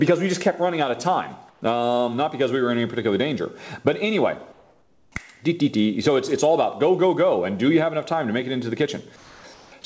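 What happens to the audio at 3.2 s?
Nothing goes wrong at 3.2 s; the sound carries on intact through the call path, band-limited as usual for that G.722 link, with nothing above 8 kHz.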